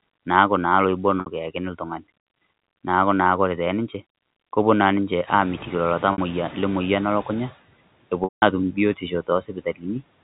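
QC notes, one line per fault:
1.20 s, 6.12 s and 8.24 s: packet loss with pitch repetition. Gaps of 60, 60 and 180 ms (fitting 20 ms packets) are bridged by repeating the last pitch period. The short two sound held and buzzy; the longest fades to silence before audio cross-fades back.
5.27 to 7.56 s: noise suppressor catching up. When the room noise jumps by about 16 dB near 5.5 s, the suppressor's estimate lags, so the noise passes with less reduction at first, then sinks by about 12 dB over roughly 2.3 s as the estimate adapts.
8.96 to 9.85 s: speech cut by the noise suppressor. The suppressor mistakes parts of the speech for background noise and turns them down with it, by about 17 dB at the deepest, for about a third of a second in all. Those stretches sound swallowed and faint.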